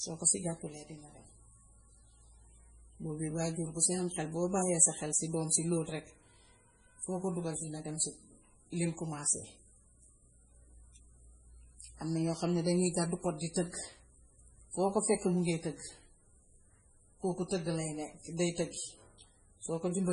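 MP3 compression artefacts run through the whole of this speech recording, and the damage is heavy. Nothing is present above 10.5 kHz, a hard treble ceiling typical of an encoder short of bits, and the starved bands give the speech a watery, swirling texture as weak frequency lines drop in and out between frames, with metallic chirps on sibilants and softened attacks. The cause is likely MP3 encoding at a very low bitrate, consistent with roughly 24 kbps.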